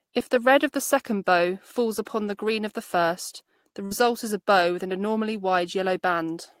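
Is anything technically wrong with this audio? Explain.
Yes, there is one burst of packet loss. From 3.85 to 3.93 s, between "of the first the" and "is a bow with", packets went missing. The receiver held the last sound for about 56 ms, fading it out. Roughly 60 ms of speech never arrives. A spectrogram shows a flat, decaying stretch followed by an abrupt jump in content.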